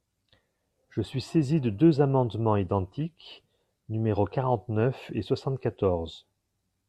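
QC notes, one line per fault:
No faults heard anywhere in the speech.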